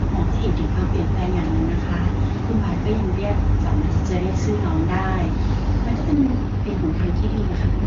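At 6.13 s an AMR rate drop sets in and lasts to the end. The wideband codec falls back to a lower rate, consistent with 23.85 down to about 8.85 kbit/s, making the speech rougher and more synthetic. A spectrogram keeps the same 7 kHz band with no gap, but harmonics smear.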